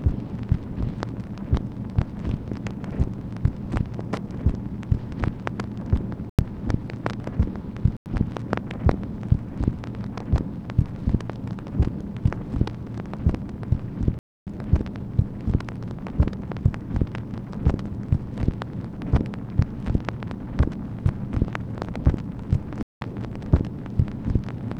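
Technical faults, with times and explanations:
6.30–6.47 s, 7.97–8.09 s, 14.19–14.47 s and 22.83–23.01 s: corrupt frame muted. Each gap cuts in abruptly and lasts about 0.13 to 0.28 s, consistent with a few whole compressed frames being rejected by the decoder because of bit errors. The player filled each rejected frame with silence rather than guessing at the missing audio, so the sound drops out completely and then resumes on schedule without losing timing.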